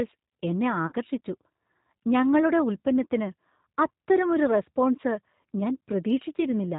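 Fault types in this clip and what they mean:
G.729 codec: Throughout, the speech is carried by a low-rate coder that models the vocal tract and pitch rather than the waveform, which fits G.729A at 8 kbit/s. The damage is plainly audible as a rough, slightly synthetic timbre with nothing above 4 kHz. On a spectrogram the energy stops sharply at 4 kHz, and harmonics look smeared and grainy. In the waveform the fine detail does not match the original shape.
VoIP packet loss concealed by the speech codec: Packets drop out twice, from 0.87 to 0.95 s and again from 6.37 to 6.42 s. Roughly 50 ms of audio is missing in the first gap and 10 ms in the second, which fits five lost 10 ms frames and then one. The decoder fills each gap by repeating its last pitch and filter at falling gain, so the sound is stretched into a buzzy tone or coloured noise that fades before recovering. A spectrogram shows the gaps filled with stretched sound that fades out, and the waveform shows the amplitude shrinking.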